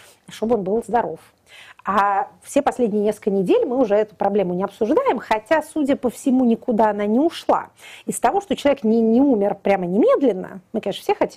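Nothing stood out as a fault on listening to the audio.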